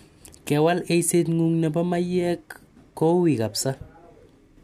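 No technical faults are audible.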